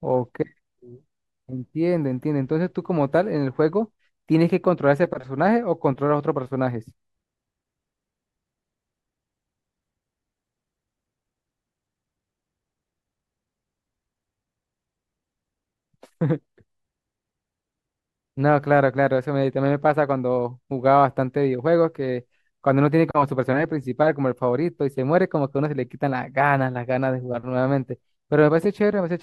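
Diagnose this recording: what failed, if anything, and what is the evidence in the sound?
Listening through the speech in this recording, nothing stood out as a fault at any stage of the chain.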